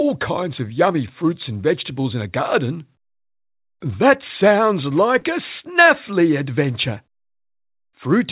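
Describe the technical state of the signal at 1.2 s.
At 1.2 s the signal is intact, with no fault present; the sound comes through the call path band-limited to nothing above 4 kHz, which fits a G.711 A-law telephone codec.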